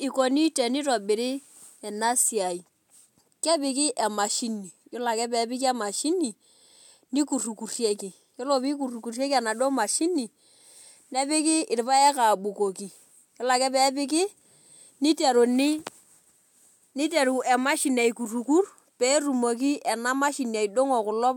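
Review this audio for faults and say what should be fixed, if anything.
Nothing in this speech recording calls for a fix. No faults can be heard anywhere in it, so it needs no changes.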